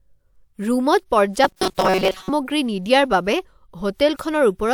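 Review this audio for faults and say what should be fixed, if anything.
From 1.44 s to 2.30 s the speech turns into a rigid, metallic buzz pitched at 188 Hz, still loosely tracing the words. This is robotic sound from repeated short buffers, most likely caused by audio arriving too seldom so that playback loops the last fragment while most of the real signal in that stretch is skipped. A 188 Hz buzz fits a repeated chunk of about 5.3 ms. To prevent it, enlarge the jitter or playback buffer, or fix the upstream delivery stalls, so fresh audio arrives before the buffer runs dry.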